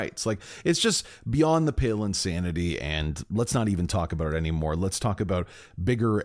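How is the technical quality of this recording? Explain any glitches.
No faults or glitches are audible.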